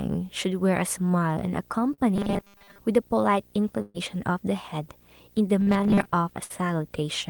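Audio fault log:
Throughout: video or display buzz. A screen or video cable is coupling into the audio, adding a buzz at the 59.94 Hz field rate with hash above it, and a thin, very high tone at the 15.7 kHz line rate. It sits around 30 dB below the speech. On a spectrogram it shows as a comb of horizontal lines at 59.94 Hz and its harmonics, plus a steady line near 15.7 kHz that runs under pauses and speech alike.
1.93 to 2.00 s: short concealed packet loss. About 40 ms of speech never arrived in time, and the receiver covered the hole with 42 ms of sound extended from what came before. It then blended back into the real signal, so the gap is heard as a brief smear or wobble rather than a dropout. On a spectrogram the last sound is held in a short, unnaturally steady patch. The waveform shows a smooth stretch with no gap.
2.16 to 2.78 s and 5.61 to 6.07 s: robotic sound from repeated short buffers. 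In both runs the speech turns into a rigid, metallic buzz at 200 Hz that roughly follows the syllables. This is likely caused by new audio arriving too seldom, with the last few milliseconds replayed for most of each run while real audio is skipped. A 200 Hz period fits a 5 ms buffer. A spectrogram shows evenly spaced 200 Hz harmonics that ignore the natural pitch. The waveform repeats identically.
3.82 to 3.96 s and 6.44 to 6.52 s: burst of packet loss. About 120 ms and then 60 ms of speech went missing. Each hole was bridged with continued sound, about 126 ms and 55 ms respectively, that fades as it goes, so a voiced sound becomes a held buzz and other sounds a decaying hiss. The speech then resumes further on, with the part in between gone. On a spectrogram the last sound stretches into a frozen patch that dims before a sudden change. The waveform envelope shows the taper and then a jump.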